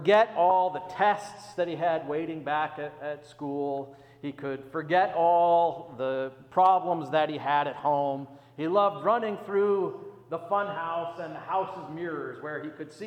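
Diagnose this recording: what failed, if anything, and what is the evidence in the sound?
A brief grainy smear at about 0.50 s, where the tonal detail blurs into noise for roughly 10 ms and then the audio carries on. This is a lost LE Audio frame on the Bluetooth link, which fits a single 10 ms frame going missing. The LC3 decoder concealed it by repeating the previous spectrum with randomised signs, which is why tones smear into noise instead of leaving a gap.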